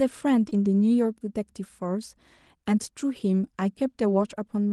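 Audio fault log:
0.49–0.53 s, short concealed packet loss: About 20 ms of the speech did not reach the decoder in time, and the receiver covered the gap by extending the preceding sound for roughly 14 ms before blending back into the received audio. The synthesized stretch continues the sound just before it. This produces a brief smear or wobble at this point rather than a clean dropout.
0.53–0.55 s, lost packet rebuilt from error correction: A single 20 ms packet was lost immediately after the concealed gap. It was reconstructed from a low-bitrate redundant copy carried in the following packet, which is Opus in-band forward error correction, so no silence results. That one frame is coarser and noisier than the surrounding Opus audio, whose upper limit near 12 kHz is consistent with a 32 kbps call setting. The result is a momentary roughening rather than a gap.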